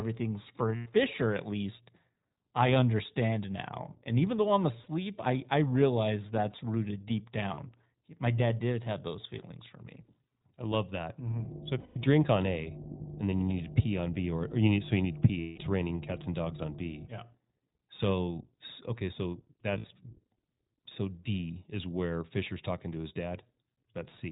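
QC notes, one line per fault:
Throughout, iLBC codec: band-limited narrowband audio with nothing above 4 kHz and a plainly rough, synthetic edge on the speech. Each 20 ms frame's excitation is coded independently, which fits the 15.2 kbps mode.
0.76–0.87 s, 4.84–4.87 s, 7.54–7.60 s, 11.80–11.98 s, 15.40–15.60 s, 19.78–19.86 s, lost iLBC frames: gaps of 20 to 180 ms, after "even though I'm" (4.84 s), "realize that's rooted deep" (7.54 s) and "okay so" (19.78 s). The decoder repeats the last pitch cycle mixed with noise, giving a held, buzzy vowel that fades in the longer gaps. The speech recovers almost at once.
11.27–17.08 s, mains hum: a steady 50 Hz tone with low harmonics, about 10 dB below the speech. It comes from power-line coupling through a ground loop or a nearby transformer.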